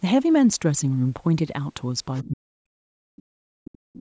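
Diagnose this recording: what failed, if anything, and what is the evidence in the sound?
Other side's voice leaking through, at 2.15 to 2.29 s and again at 3.96 to 4.01 s: a faint second voice sits roughly 20 dB below the talker, in short scraps. This points to the call processing stage, likely an echo canceller leaving loudspeaker pickup in the microphone signal. Steady wiring crosstalk would not come and go in short pieces like this.

Speech suppressed in double talk, from 2.21 s to the end: the talker's level falls away, at its deepest by around 40 dB, for about two seconds in all, beginning as the leaked voice appears. The echo canceller likely turned both voices down when both sides spoke. A network dropout would not line up with the other voice like this.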